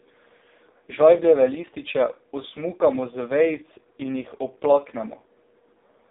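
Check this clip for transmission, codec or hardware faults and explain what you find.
The speech carries one codec fault, present for the whole clip.

AMR narrowband mobile codec, throughout: the speech has gone through the AMR-NB phone codec, which rebuilds each 20 ms frame from a vocal-tract filter excited by a handful of pulses. Here the line band runs from about 250 Hz to 3.7 kHz, with nothing above 3.8 kHz, giving a thin, muffled phone sound. The damage is heavy, with a buzzy, synthetic edge on the voice that points to the codec's lowest mode, around 4.75 kbps.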